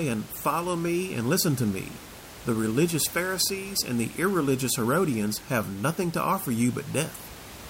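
Nothing technical goes wrong in this bit of speech; the only thing underneath it is some ordinary room noise sitting about 18 dB below the talking, which just comes with the recording space.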